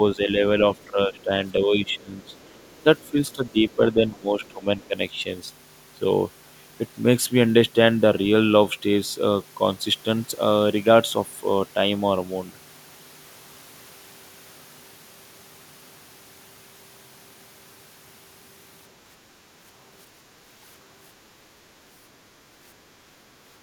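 A speech recording in which the echo canceller was likely confused by both ends talking at once. It pulled the talker down along with the echo, causing speech suppressed in double talk from 0.15 to 2.35 s and from 2.83 to 4.95 s. Within each span, roughly a second of the voice dips by up to about 15 dB. The same canceller also likely failed to strip out all of the loudspeaker signal, so the other side's voice leaks through faintly, far below the talker, at 0.81 to 1.22 s, 1.90 to 1.97 s and 2.28 to 3.35 s. From 16.01 s to the end, the section plays at the wrong speed, likely from playback against a mismatched clock. It runs at 0.864 times its original rate, so the voice turns slower and drops about three semitones.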